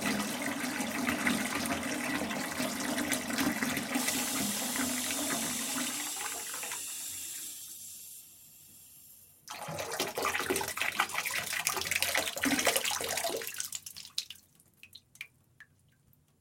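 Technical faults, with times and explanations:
4.76 s and 10.71 s: audio missing between chunks. At each point the sound jumps forward abruptly, with roughly 50 ms dropped and the material on either side butted together with no gap of silence. The two skips fall about 6 s apart, which points to the recording or processing likely being handled in 6-second blocks, with a short stretch lost each time one block is closed and the next begins.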